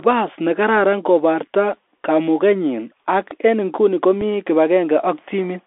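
Throughout, the speech carries Bluetooth CVSD headset codec damage: band-limited to roughly 300 Hz–3.5 kHz, with granular hiss, scratchy sibilants, and slope-overload distortion on loud high-frequency sounds, consistent with a 64 kbps CVSD link. At 4.21 s, right after "kamugenyin ak en nguni", unconcealed Bluetooth headset packet loss leaves a 3.8 ms hole, about one lost packet, with an abrupt edge.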